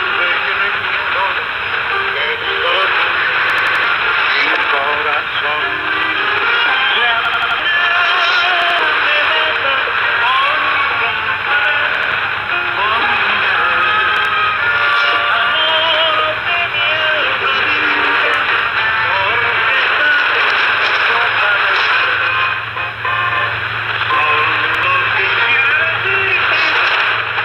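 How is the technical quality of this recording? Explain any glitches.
The recording is marred by repeated-buffer stutters: six times, at 3.50, 7.25, 8.62, 11.95, 14.17 and 24.75 s, a slice of about 85 ms (which fits a 4096-sample buffer) replays with a hard join each time. New audio failed to arrive, so the device looped its last buffer: four extra plays at 3.50 and 7.25 s, two at 8.62 and 11.95 s, one at 14.17 and 24.75 s. Each is heard as a rhythmic stutter, with roughly a tenth to a third of a second of sound lost.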